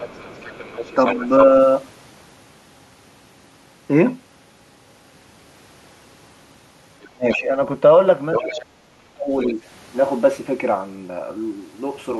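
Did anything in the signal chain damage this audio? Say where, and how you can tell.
Yes, in call processing. The other side's voice leaks through at 0.0–1.28 s, 7.02–7.38 s, 8.34–8.61 s and 9.39–9.54 s. It is mostly well below the talker but nearly as loud near 8.4 s. Likely cause: the echo canceller left loudspeaker pickup in the microphone signal.

Speech is suppressed in double talk at 7.1–7.52 s and 8.36–9.6 s, overlapping the leaked far-end speech. The talker's level dips by roughly 25 to 30 dB. This likely happened because the canceller could not separate near speech from echo and attenuated both.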